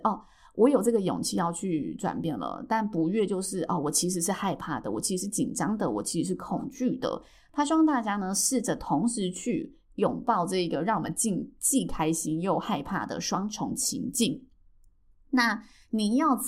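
No technical faults can be heard anywhere in this speech recording. There is nothing in the audio that calls for a timestamp or a note.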